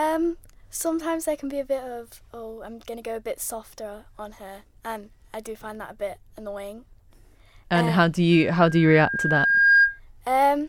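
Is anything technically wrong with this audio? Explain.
Yes. Loudspeaker feedback squeal, 8.32 to 10.00 s, after "and um how do": the microphone re-amplifies its own loudspeaker, so a 1.6 kHz tone swells over about a second and a half to roughly 10 dB above the speech.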